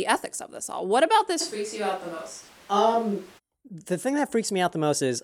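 A likely switch to a distant microphone, with the close microphone lost, runs from 1.42 s to 3.37 s. The speech turns suddenly hollow and roomy, thinner in the bass, with room noise about 25 dB below it, though the level barely changes.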